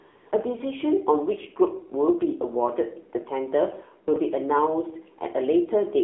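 From 0 to 0.32 s the clip opens on a smooth, even hiss that then drops away abruptly. This is AMR comfort noise: no speech frames were sent for those 315 ms, so the receiver filled the gap with synthetic noise built from a coarse level and spectrum estimate.

Throughout, the speech sounds thin, buzzy and somewhat synthetic, confined to a line band of 250 Hz to 3.4 kHz with nothing above. This is the AMR narrowband mobile codec. Its vocal-tract model is driven by sparse pulses, and the plainly audible damage fits a low setting around 7.4 kbps.

Between 4.08 and 4.16 s there is a brief garbled, jumbled moment. These are chunks out of order: a 20 ms piece of audio arrived or was written late and plays after the three chunks that should have followed it, so nothing is lost but the sequence is scrambled.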